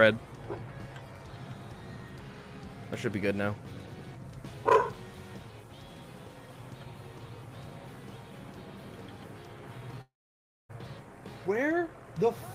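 At 10.01 s the sound breaks into a short buzzy continuation of its last moment that fades quickly, leaving about 0.6 s of near silence before the audio returns at 10.71 s, with roughly 0.68 s of material simply gone. This is a long network dropout, likely caused by the stream's packets stopping for that span: the receiver briefly stretched out the last sound it had, then gave up and played silence, and playback resumed further on.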